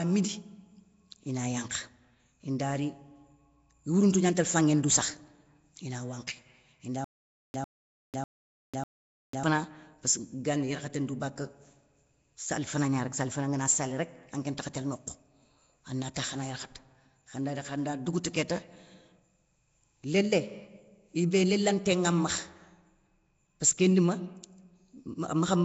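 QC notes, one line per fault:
Throughout: Nellymoser compression. The speech carries a rough, hissy halo and a smeared, underwater quality, and the damage is plainly audible. This points to the likely cause, the old Flash microphone codec, here at a rate that fits 32 kbps. Its few bits per sample leave weak bands with nothing, so they are filled with noise. On a spectrogram there is nothing above 7.7 kHz, and the lower bands look grainy and speckled instead of showing clean harmonics.
7.04 to 9.43 s: stutter with silent gaps. A 100.68 ms burst plays four times, each followed by 496.8 ms of digital silence, so it repeats every 597.48 ms. The audio that belonged in that span is simply missing. This sounds like a stalled stream or player that likely replayed its last fragment on each retry and then ran dry. On the waveform it shows as identical short blocks separated by flat, near-silent lines at an even spacing.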